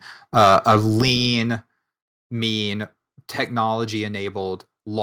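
From 0.36 to 1.02 s the speech shows microphone overload. The loudest syllables carry a harsh, crackling edge because their peaks are flattened, with a few percent of samples clipped. The likely cause is input gain set about 6 dB too high for the converter.

At 1.02 s the microphone volume is stepped down. Voice and background both drop abruptly by about 7 dB in one step, right after the distorted stretch. This is likely the call software detecting the clipping and cutting the device's input gain.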